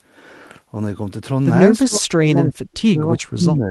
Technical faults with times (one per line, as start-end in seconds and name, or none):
1.84-3.71 speech suppressed in double talk